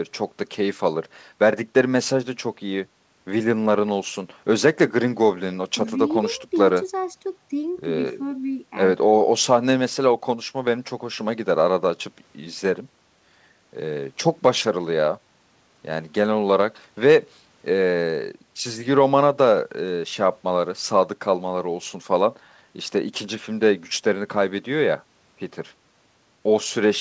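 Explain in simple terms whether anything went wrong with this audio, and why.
Nothing stood out on listening; the speech simply carries the normal sound of an internet call, which leaves out the very highest sounds above 8 kHz, and that is expected rather than a problem.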